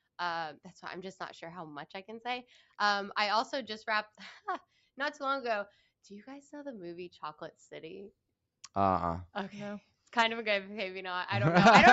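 No faults are audible, and the sound carries nothing above about 8 kHz, which fits a call codec limited to an 8 kHz bandwidth after the usual microphone processing of a call.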